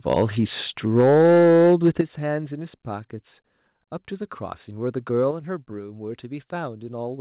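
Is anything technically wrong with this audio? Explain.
Yes, there are two kinds of fault in this speech, heard through a G.711 call path whose audio stops at 4 kHz.

Microphone overload at 0.1–0.22 s and 0.96–2.01 s: peaks run about 3 and 4 dB past the converter's limit. The likely cause is an input volume set too high, so the converter cuts off the tops of the peaks, giving a harsh crackle. On the waveform the peaks appear as flattened plateaus, affecting roughly a sixth of the samples in the longer stretch. On the spectrogram they show as smeared harmonics.

Microphone volume stepped down at 1.01, 2.01 and 5.31 s, by about 2, 9 and 5 dB. This is likely the call software lowering the microphone volume when it found the input too loud. Both the voice and the background drop abruptly at each point, which appears on the waveform as sudden steps in the envelope.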